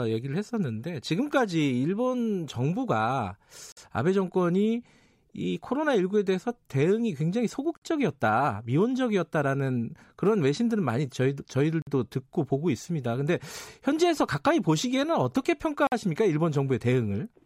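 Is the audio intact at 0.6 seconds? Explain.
Yes, the speech at 0.6 seconds plays through cleanly, with no dropout, click, distortion or other technical fault at that moment.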